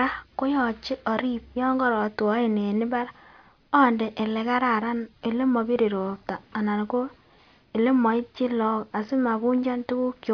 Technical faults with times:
none

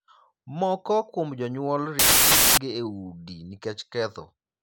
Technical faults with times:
1.99-2.57 samples built from the wrong bytes

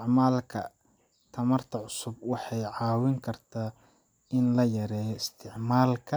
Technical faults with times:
none

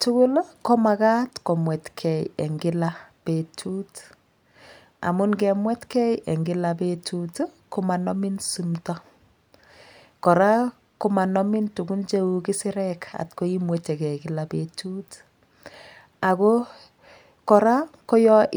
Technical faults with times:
none

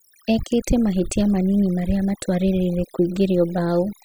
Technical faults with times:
0.00-4.04 overdone noise removal

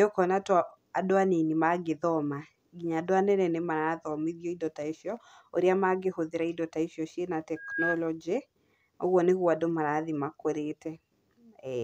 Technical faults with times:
7.56-8.00 loudspeaker feedback squeal

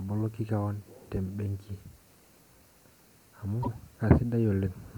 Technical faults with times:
3.59-3.68 damaged data in a compressed stream

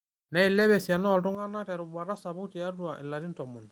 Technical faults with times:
0.51-0.61 lost packet rebuilt from error correction
1.35-3.72 input switched to a poorer device
2.15-2.17 lost packet rebuilt from error correction

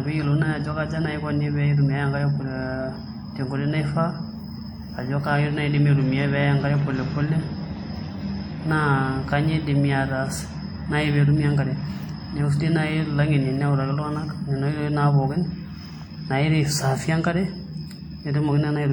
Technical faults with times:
0.00-18.93 WMA compression

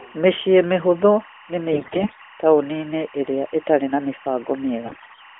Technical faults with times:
0.00-5.39 timecode bleed
1.72-2.23 AMR bit errors
4.86-5.21 AMR bit errors

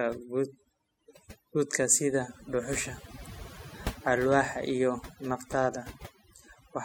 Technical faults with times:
0.00-6.84 overdone noise removal

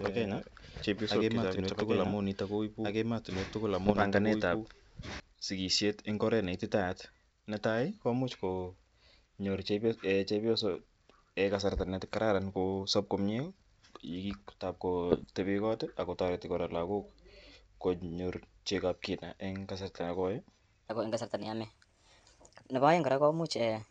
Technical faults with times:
0.00-5.20 doubled audio track
3.86-4.03 bit errors on an ADPCM link
12.08-12.18 bit errors on an ADPCM link
15.10-15.25 bit errors on an ADPCM link
20.89-23.90 section at the wrong speed

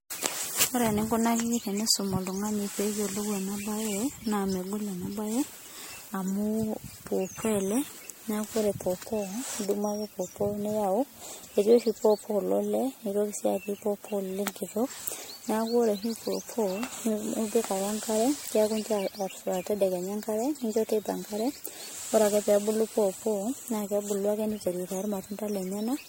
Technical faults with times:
0.00-26.09 generation loss

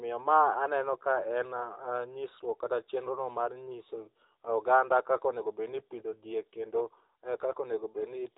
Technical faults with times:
0.00-8.38 AMR narrowband mobile codec

